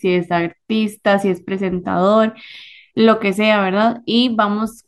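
No technical faults are audible in the recording.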